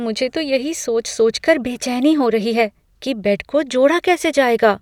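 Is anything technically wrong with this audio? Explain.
No, nothing in this speech recording stood out as a technical problem on listening.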